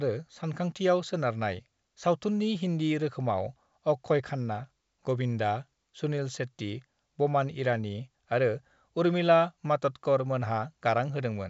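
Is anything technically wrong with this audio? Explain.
No, this is speech through G.722 wideband telephone coding, with content stopping around 7.7 kHz as that codec's band limit sets it and a sound consistent with the full 64 kbit/s mode, and nothing in it indicates a technical problem.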